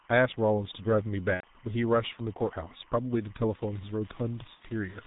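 Timecode bleed runs through the whole of this speech recording: a steady chirping warble sits about 30 dB below the talker, flipping between two pitches near 1 and 2 kHz. That pattern comes from linear timecode leaking in from an adjacent track or cable. Its square-wave bits toggle between the two tones, and the warble repeats 25 times a second, matching a 25 frames-per-second code. The G.723.1 codec damage is also present throughout and is heavy. Nothing survives above 4 kHz, so the speech is muffled and hoarse and the consonants smear together. The sound points to the 6.3 kbit/s mode, whose 30 ms frames and sluggish voice model cannot follow quick changes in the speech. VoIP packet loss concealed by the speech codec appears twice, from 1.34 to 1.46 s and from 4.55 to 4.63 s. In each gap the decoder had no new data, so it kept replaying its last pitch and filter settings at falling gain. 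The speech is stretched into a fading sound. The first gap is roughly 90 ms long, consistent with three lost frames, and the third frame is muted. The second gap is 60 ms, consistent with two. Each frame builds on the one before, so the speech stays weak or distorted for a short while after real packets resume.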